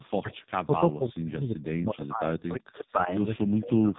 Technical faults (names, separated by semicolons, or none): AMR narrowband mobile codec; speech suppressed in double talk; echo leak